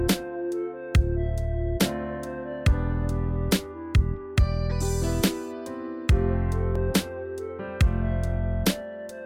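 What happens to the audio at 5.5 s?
Nothing goes wrong at 5.5 s; the audio carries on intact through that moment with no dropout, glitch or distortion.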